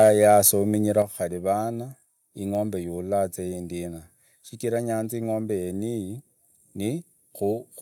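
From the start to 0.49 s the speech has a harsh, crackling edge on its loudest moments, which points to microphone overload, most likely an input volume set too high, so peaks pushed about 3 dB past the converter's limit and had their tops sheared off. Only a small share of samples, roughly one or two percent, are affected. On a waveform the peaks appear as flat plateaus; a spectrogram shows vertical smears of broadband energy at each clipped peak.

At 1.02 s, just before "khari vana ingombe ya", voice and background together drop abruptly by about 6 dB. This is a microphone volume stepped down, likely the call software reacting to the earlier clipping by lowering the device's input gain in a single move. A second, much smaller step of about 1 dB comes at 7.53 s. On a waveform each appears as a sudden shrink in overall envelope height, and on a spectrogram as a uniform darkening across all frequencies from that instant on.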